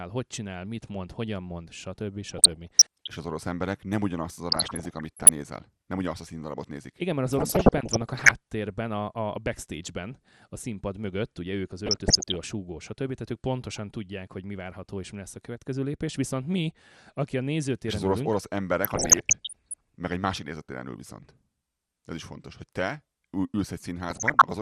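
MP2 compression is audible for the whole length of the speech: the sound is dull and carries a gurgling, granular roughness. The likely cause is MPEG Layer II coding at a rate that fits about 80 kbps. That rate is too low for the coder, so it starves the 32 sub-bands of bits, shuts off the upper bands in flickering fashion, and quantises the remaining bands coarsely.

DAB burbling breaks out at 2.24–3.07 s, 4.52–5.29 s, and 7.33–8.33 s (right after "mert az"). It returns at 11.86–12.40 s, 18.84–19.75 s (between "ülünk orosz" and "meg egy másik nézőtéren"), and 24.10–24.42 s. Bit errors of roughly 0.7 to 1 percent slipped past error correction and corrupted samples and scale factors, so short blips of noise appear in single sub-bands and sub-bands jump in level for up to a frame.

One channel drops out at 15.56–15.61 s, just after "és mi lesz a". For about 50 ms the audio suddenly sinks by about 6 dB and then snaps back. 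The likely cause is a brief loss of one stereo channel before the mono sum, which halves whatever was common to both channels and removes anything carried only by the missing side.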